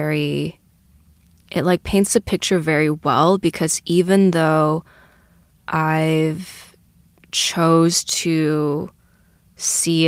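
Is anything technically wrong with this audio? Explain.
No, nothing is technically wrong with this audio.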